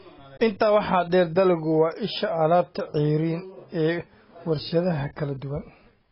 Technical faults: AAC compression

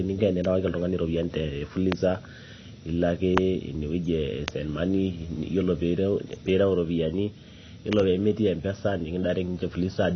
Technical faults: AAC compression; loud pop

